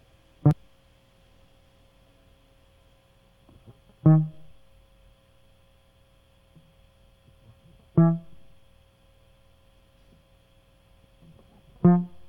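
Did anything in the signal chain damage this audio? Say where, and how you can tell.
Yes: damaged data in a compressed stream at 0.51–0.53, 4.50 and 10.22 s, brief blips where the decoder misread corrupted codec frames and lost sync.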